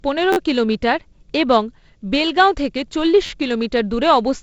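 Speech, carried over G.722 wideband telephone coding with nothing above about 7.7 kHz, has two repeated-buffer stutters, at 0.33 to 0.37 s and 3.26 to 3.30 s. An audio chunk of about 12 ms, which fits a 512-sample buffer, replays four and then three extra times with hard joins because fresh audio arrived late.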